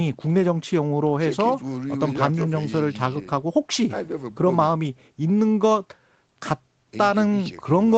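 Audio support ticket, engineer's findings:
No faults found: speech passes through call microphone processing and the WebRTC call path with its usual coding noise, and the band stops at about 8 kHz, which fits a wideband Opus setting.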